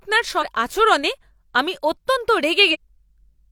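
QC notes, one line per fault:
0.38–0.44 s, compressed frames skipped: the speech lurches forward, dropping roughly 0.4 s of material. The jump fits a whole run of 46.4 ms codec frames going unplayed.
2.70–2.76 s, compressed frames skipped: the same fault again, this time losing roughly 0.3 s.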